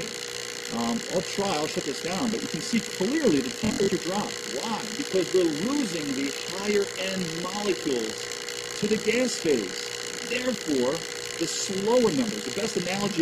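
From 3.60 s to 3.90 s there is Bluetooth stutter. Packets went missing or arrived late, and the receiver replayed its last slice while waiting. About 190 ms of audio drops out in short bursts, the longest lasting about 70 ms. The result is a rapid buzzing stutter, and the sound then resumes further on.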